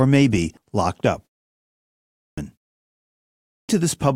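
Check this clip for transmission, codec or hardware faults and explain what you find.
Two faults of one kind: clipped start after a pause. Following "may be locked up" and a 0.6 s pause, 1.80–2.38 s is swallowed; after a 0.55 s pause, 3.04–3.69 s is lost. The output device sleeps through silence and wakes late, so speech resumes abruptly without its opening sounds.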